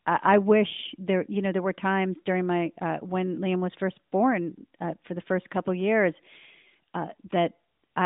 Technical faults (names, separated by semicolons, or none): none